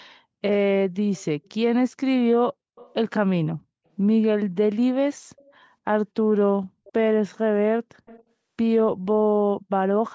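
Faint delayed repeats of the speech surface briefly at 1.44–1.51, 2.76–2.94, 5.36–5.54, 6.84–6.93 and 8.06–8.23 s, trailing about 260 ms behind, later about 283 ms, and sitting far below the speech. This echo leak is likely residue a loudspeaker-side echo canceller failed to remove.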